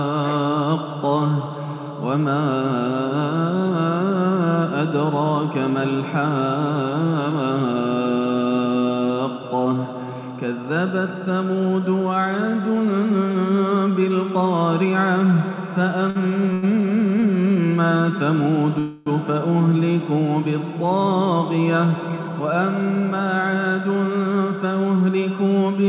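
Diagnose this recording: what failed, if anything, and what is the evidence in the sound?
At the network and jitter-buffer stage, three short stalls from late packets left the buffer empty at 16.10 s, 16.53 s and 17.20 s. The receiver held the last sound for 52, 92 and 21 ms, so each moment stretches with a faint buzz before resuming unbroken.

From 18.79 to 19.08 s a call audio freeze holds the sound for about 0.27 s as a decaying buzz with no true silence, then continues from the same point. This is likely packets delayed in transit draining the jitter buffer, inserting a gap rather than losing audio.

After those delays the buffer held surplus audio, so a jitter buffer speed-up from 21.95 to 24.72 s trimmed pitch-period slices to shed roughly a fifth of a second. The sound runs at 108 % speed with pitch unchanged, audibly hurried, over a call path band-limited to 4 kHz.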